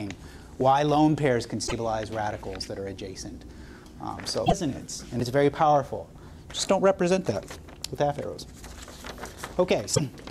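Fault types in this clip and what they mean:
Damaged data in a compressed stream: part of the encoded data got corrupted, so the decoder loses its place and has to hunt for the next good frame. That gives three brief disruptions, each under a tenth of a second, at 1.63, 4.43 and 9.92 s.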